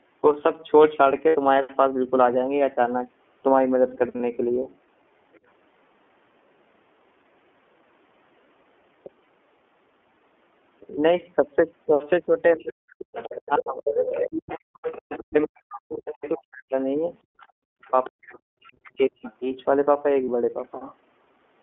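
The whole clip has the iLBC codec's sound: speech squeezed into roughly 250 Hz to 3.4 kHz, with a rough, slightly synthetic edge that's plainly audible. The 30 ms framing fits the 13.33 kbps mode. Each frame is coded on its own, so damage stays local.

You'll hear lost iLBC frames at 1.29–1.36 s (60 ms, so probably two frames), then 4.17–4.20 s, 9.24–9.27 s and 20.24–20.28 s, about 30 ms each. In each spot the decoder repeats the last pitch cycle with some noise, and you get a short held, buzzy vowel. The voice comes back clean right after.

From 12.57 to 16.75 s the talker's voice keeps dropping, by roughly 40 dB at worst and for around three seconds in total. It dips again from 17.52 to 19.28 s, about a second and a half of that stretch. This is likely speech suppressed in double talk. The echo canceller couldn't tell the talker from the loudspeaker echo and turned everything down.

Over those same stretches the other side's voice is leaking through, likely left over from incomplete echo cancellation. 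The longest run is 12.67–15.19 s, about 10 dB under the main speech. Fainter scraps come at 16.24–16.31 s, 17.19–18.1 s (about 20 dB down) and 18.67–19.33 s (about 25 dB down).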